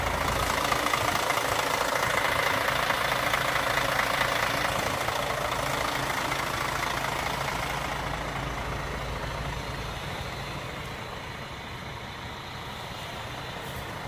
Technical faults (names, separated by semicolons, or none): none